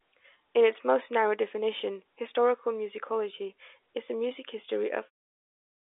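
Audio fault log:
The signal is technically sound, carried in a narrowband telephone-style coding that keeps roughly 300 Hz to 3.6 kHz, with a smooth fade-out beginning at about 5 s and ending at 5.11 s.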